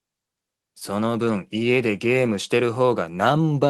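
Nothing in this audio stands out as a technical fault. It carries the character of a working call path with an Opus-style codec, its top end rolling off around 12 kHz, which fits a moderate call bitrate.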